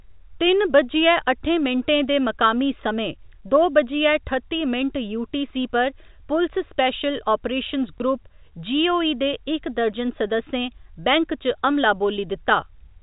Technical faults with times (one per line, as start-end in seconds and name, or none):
7.98 packet loss with last packet repeated